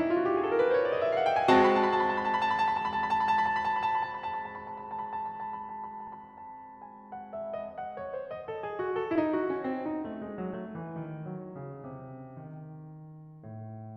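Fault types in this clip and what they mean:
Compressed frames skipped: whole blocks of the coded stream never reached the output, either missing from the file or discarded by the decoder as damaged, so the music leaps forward by whole frames, which fits a 20 ms frame length. At 6.07 s roughly two frames, some 40 ms, vanish, and at 9.16 s about three frames, around 70 ms.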